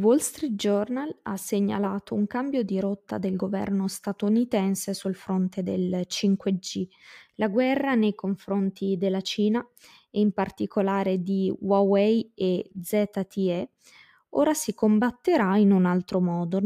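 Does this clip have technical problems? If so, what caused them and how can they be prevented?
No, this clip has no technical problems, so there is nothing to prevent.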